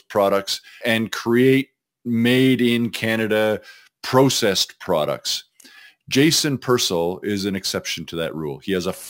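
A crude rate conversion runs throughout this speech recording: samples were repeated by nearest-neighbour picking rather than filtered, which fits a 32 kHz to 44.1 kHz change. The resulting error, roughly 20 dB below the speech, adds a gritty, inharmonic fizz tracking louder and brighter syllables.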